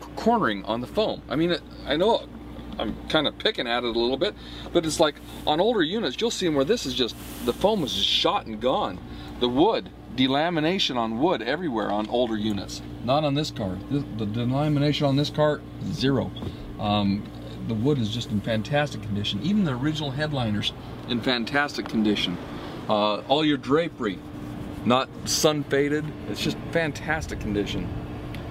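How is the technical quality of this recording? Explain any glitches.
No technical faults or glitches can be heard anywhere.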